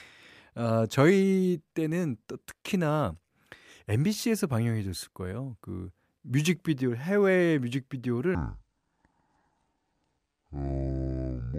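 Likely a wrong-clock playback from 8.35 s to 11.58 s leaves that section at the wrong speed, 0.573x, so the speech drags and drops about ten semitones.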